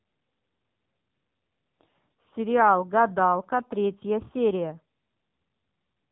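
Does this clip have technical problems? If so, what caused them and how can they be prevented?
Yes. The speech went through the AMR narrowband mobile codec throughout, squeezed to a low bitrate that fits roughly the 6.7 kbps mode. The encoder rebuilds the voice from a vocal-tract model fed by a few pulses per subframe, and at so few bits that model is coarse, so the voice sounds heavily buzzy and synthetic. Narrowband coding also removes everything above about 3.8 kHz, leaving it dull and boxy. To prevent this, record or route the call over a wideband link, or use a higher AMR bitrate mode.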